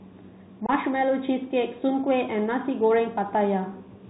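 Throughout, the speech carries the Bluetooth CVSD headset codec sound, consistent with a 64 kbps CVSD link. Each sample is coded as a single up or down step of adaptive size, so nothing survives above 4 kHz. On a spectrogram the energy stops flat at that line. S sounds turn scratchy, louder high-frequency moments distort, and a grainy hiss sits underneath.

From 0.66 to 0.70 s comes unconcealed Bluetooth headset packet loss. Roughly 22 ms of audio, apparently several short packets, never arrived and were replaced with silence or an idle pattern. It is heard as an abrupt hole, and the speech resumes briefly quieter. The waveform shows a flat gap cut sharply, and the spectrogram a thin vertical blank stripe.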